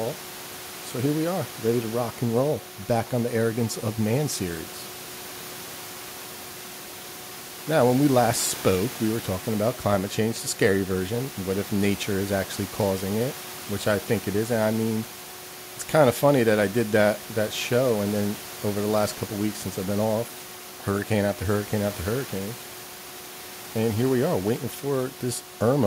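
Nothing in this speech goes wrong on the technical side: the only thing underneath it is the room's own background noise, sitting about 18 dB below the speech, which is just part of where it was recorded.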